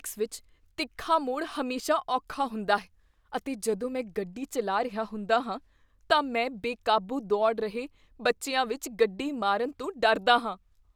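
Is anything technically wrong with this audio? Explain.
No, nothing is technically wrong with this audio.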